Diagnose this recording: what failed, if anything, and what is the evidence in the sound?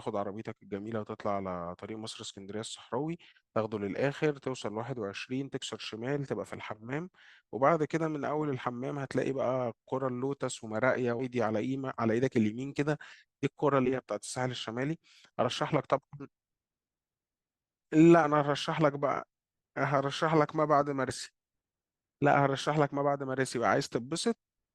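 Compressed frames skipped, at the codec stage: at 11.19, 13.85, 18.23 and 21.09 s the speech jumps ahead by up to roughly a fifth of a second, consistent with whole 20 ms frames missing. The speech skips forward rather than pausing, because whole frames are left out of playback.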